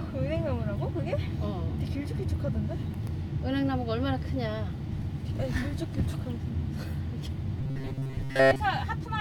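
Robotic sound from repeated short buffers runs from 7.61 to 8.60 s: the audio turns into a rigid, metallic buzz pitched at 134 Hz across most of that stretch. The likely cause is a tiny block of roughly 7.5 ms being replayed while fresh audio failed to arrive.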